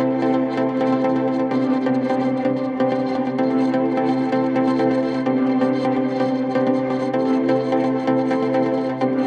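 No dropouts, clicks, distortion or timing faults turn up anywhere in the recording.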